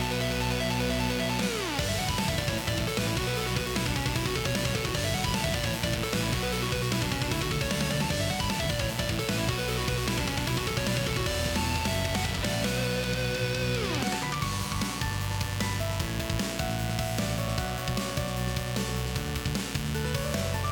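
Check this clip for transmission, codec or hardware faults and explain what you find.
There's one hardware fault here: mains buzz, running the whole way through. It's a 60 Hz hum with harmonics stacking up into the kilohertz range, sitting only a little below the sound itself. Something like a dimmer, rectifier or unshielded cable is coupling sharp switching spikes into the chain twice per mains cycle, so you get a steady, raspy buzz under everything.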